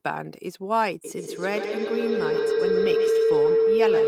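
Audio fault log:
1.04–4.07 s, feedback howl: a second device in the same room picks up the loudspeaker output and feeds it back into the call, and each pass around the microphone-to-loudspeaker loop comes back louder. Instead of decaying, the repeats pile up and narrow to the band the loop favours, forming a tone around 500 Hz that pulses roughly every 150 ms and climbs to about 7 dB above the speech. It keeps building until the clip ends.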